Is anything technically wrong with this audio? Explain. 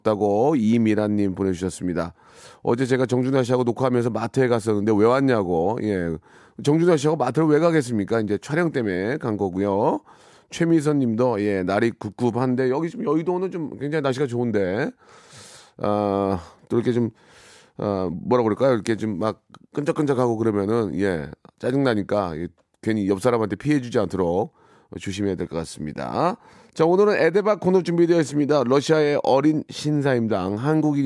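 No, nothing is technically wrong with this audio.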